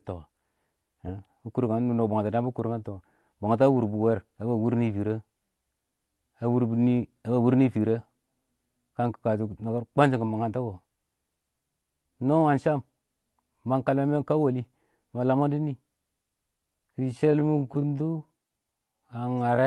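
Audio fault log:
16.97 to 19.67 s, time-stretched section: speech abruptly drags at 0.57 times its pace at unchanged pitch, likely from software repeating short pieces to lengthen it.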